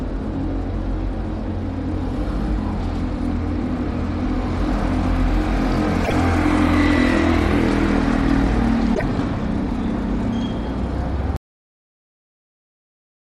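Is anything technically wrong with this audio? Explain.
Yes. Damaged data in a compressed stream at 6.01 to 6.13 s and again at 8.92 to 9.03 s: corrupt bytes make the decoder misread frames, lose sync and hunt for the next valid header. Each spot comes out as a short glitch of about a tenth of a second.

Audio dropout to silence from 11.36 s to the end: the sound cuts off abruptly and the last two seconds are silence with no room tone. The likely cause is a lost input, such as a disconnected device or failed link, while the recorder kept writing zeros.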